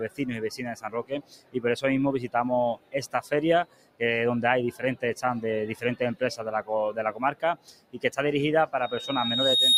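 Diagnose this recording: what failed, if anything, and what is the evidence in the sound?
The failure is in call processing: a noise suppressor applied to music or sounds, built for speech, has been left running on material it wasn't designed for. It treats sustained content and decays as background noise and pulls them down, so the level swings by roughly 15 dB across the whole clip. Attacks pass while held portions sag, which gives a pumping, breathing quality. Unlike a compressor, whose gain follows loudness, this gain follows how steady the signal is.

The clearest evidence is five sections of sound cut by the noise suppressor, at 0.77 to 1.59 s, 2.76 to 2.94 s, 3.64 to 4.01 s, 4.72 to 5.03 s and 7.12 to 8.07 s. Each dips by up to about 17 dB, and at 4.72 s by about 15 dB. Sustained and fading material sinks or has its tail chopped, while onsets stay intact. A dropout or packet loss would remove everything abruptly, not just the steady parts.

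Separately, at the analogue stage, a loudspeaker feedback squeal begins at 8.82 s and runs to the end. A single tone at 3.7 kHz swells over about a second until it sits roughly 10 dB above the rest of the sound. A microphone is picking up its own loudspeaker, and the loop gain at that frequency has passed unity. A steady hum or test tone would not grow like this.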